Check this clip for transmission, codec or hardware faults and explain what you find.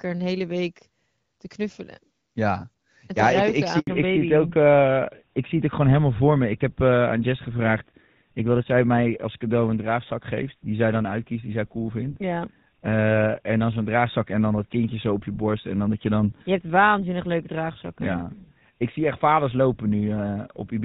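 Two faults are audible, both at the same moment. Narrowband audio continues to the end.

Handover gap, 3.79 to 3.87 s, right after "ja ik ik". The call switched networks and no frames arrived for 80 ms. The speech cuts to silence.

Fallback to narrowband, from 3.87 s onward. The link dropped from HD Voice to an older codec, likely GSM full rate. Nothing above 4 kHz remains, so speech sounds duller and rougher.

Before the switch, the wideband codec carries the speech with only light coding damage. That fits a mid-rate HD Voice mode.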